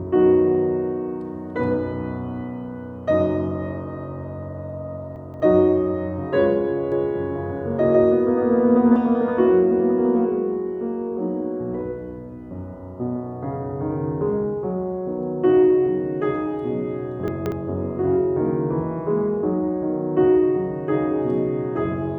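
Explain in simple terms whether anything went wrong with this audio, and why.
Two things go wrong. At 5.16 to 5.4 s, and again at 17.28 to 17.52 s, there are chunks out of order. A short 60 ms piece arrives three pieces late and plays after what should follow it. Nothing is missing, but the moment sounds jumbled.

From 6.92 to 8.96 s there is a doubled audio track. A second copy, just as loud, trails the first by roughly 150 ms, giving a flat, clean echo that starts and stops abruptly. The likely cause is the same sound being recorded twice through a slower path.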